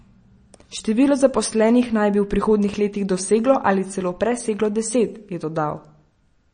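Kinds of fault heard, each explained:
MP3 compression: watery, swirly speech with nothing above 9.3 kHz, likely from an MP3 encoder starved of bits, around 35 kbps, dropping treble and weak components.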